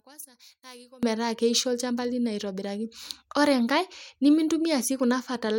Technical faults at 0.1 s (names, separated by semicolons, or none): one channel inverted